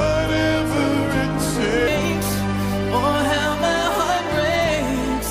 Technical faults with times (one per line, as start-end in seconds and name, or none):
0.00-1.88 section at the wrong speed